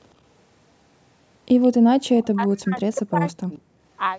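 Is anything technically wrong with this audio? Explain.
Yes, two things. From 1.62 to 1.68 s there's a faint echo leak, a copy of the speech trailing by 167 ms at roughly 35 dB down, likely a far-end loudspeaker echo the canceller missed. From 1.98 to 3.61 s the speech is suppressed in double talk, dipping and cutting out in pieces, very deeply at worst, for about a second and a half in total, likely because the canceller turned everything down while both sides talked.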